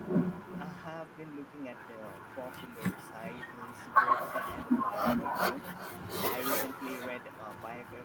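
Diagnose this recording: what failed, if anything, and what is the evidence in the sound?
Throughout the speech, every phrase is trailed by a quieter, thinner copy arriving around 0.4 s later, about 15 dB down. That is echo with no canceller, a call-processing failure: the far end's loudspeaker feeds its microphone, and nothing removes the returned signal.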